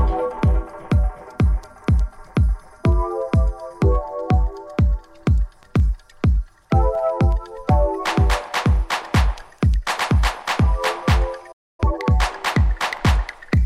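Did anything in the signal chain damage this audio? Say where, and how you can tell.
Yes. A playback stall runs from 11.52 to 11.80 s: the sound stops dead in mid-flow for about 266 ms and then resumes. That clean, total silence points to the playback stage rather than the source. The likely cause is the player's output buffer running dry, or its audio thread being blocked, so nothing reached the converter until data arrived again.

Time-compressed catch-up follows at once, from 11.80 to 12.06 s. The audio plays at twice its normal rate while keeping its pitch. This is the player at the playback stage clearing the backlog left by the stall. It cuts short slices out of the queued audio and cross-fades across the joins, which hurries the material along without raising its pitch.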